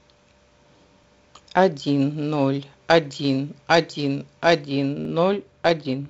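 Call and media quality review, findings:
Short click/stutter at 1.04 s, 3.05 s and 5.05 s, every 2.0 s. Overlapping chunks: each 2 s block restarts 7 ms early, so that sliver plays twice at the join.

Dull, muffled top end from 4.66 s to the end, roughly 14 dB down at 10 kHz relative to 1 kHz. De-emphasis applied wrongly: a treble-cut stage is rolling off high frequencies without matching pre-emphasis.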